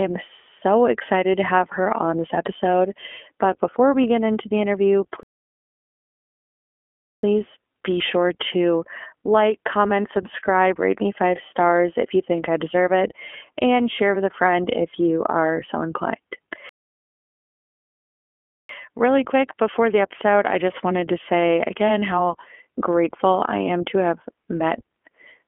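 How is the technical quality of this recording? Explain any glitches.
The recording has two clear technical problems: codec damage throughout and two playback stalls.

The whole clip passes through the iLBC codec. It codes each 20 ms frame's excitation independently, and the audio is confined to roughly a 250 Hz to 3.4 kHz telephone band, with nothing above 4 kHz. The speech sounds plainly rough and synthetic, which fits iLBC's 15.2 kbps mode.

There are two playback stalls, at 5.23 s just after "get into the interview" and at 16.69 s just after "you are so inclined". Each time the sound cuts out completely for 2 s and then resumes. The likely cause is the player running out of buffered data or its output thread being blocked.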